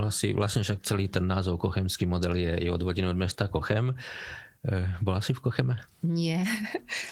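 No faults in the speech; the Opus voice compression path runs in hybrid mode at 20 kbps with full bandwidth, content reaching about 20.2 kHz, and leaves only light coding traces.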